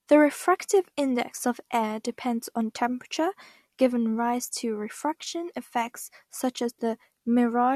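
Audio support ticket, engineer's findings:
No faults found in this speech recording. Nothing to action on this ticket.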